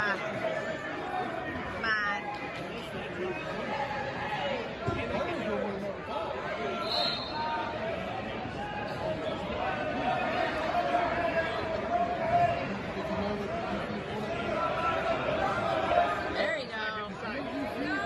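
No technical faults are audible anywhere in this recording.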